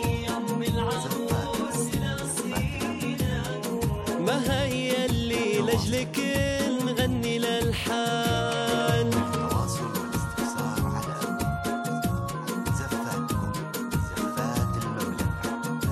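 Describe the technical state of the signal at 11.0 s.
At 11.0 s the signal is intact, with no audible dropout, distortion, glitch or other technical fault at that point.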